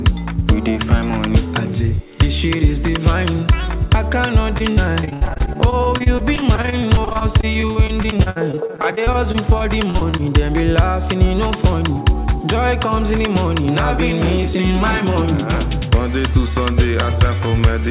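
Repeated packet loss (robotic sound) runs from 4.58 to 10.21 s. Dozens of short dropouts, the longest about 78 ms, follow one another closely. Each is papered over by stretching the preceding sound, so about a fifth of that span is concealment rather than real signal. The result is choppy, with fragments missing. The audio comes through a call path, band-limited with nothing above 4 kHz, which fits a narrowband G.711 A-law codec.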